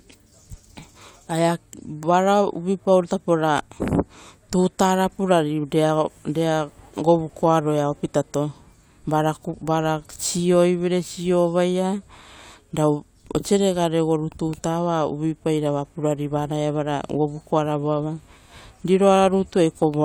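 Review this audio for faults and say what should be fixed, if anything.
Nothing here needs fixing, since no faults turn up anywhere in this speech recording.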